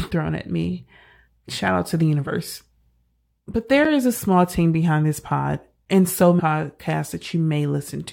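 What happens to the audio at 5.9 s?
At 5.85 s the speech breaks for about 7 ms in a gap between chunks. The audio has been split into blocks, and at this join a short stretch of silence has been inserted before the next block resumes, consistent with 2-second chunks. Nothing is lost from the signal; the sound simply stops and restarts. It is heard as a tiny hole with abrupt edges, a brief dropout in the flow of the speech.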